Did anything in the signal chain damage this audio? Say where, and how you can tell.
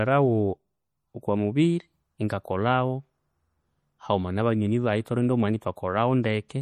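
Yes. MP3 compression damage runs throughout the speech, at the codec stage. The sound is plainly watery and swirly, with smeared consonants, which fits a low bitrate near 48 kbps likely starving the encoder, so weak frequency lines flicker between frames. Content reaches about 19.8 kHz.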